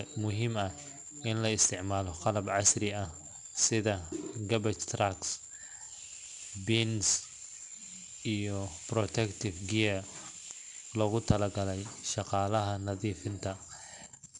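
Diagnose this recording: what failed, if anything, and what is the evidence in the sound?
The codec stage applied 4-bit ADPCM compression throughout, and the speech carries a gritty, level-tracking hiss and nothing above 10.7 kHz, which fits a bitrate near 89 kbps.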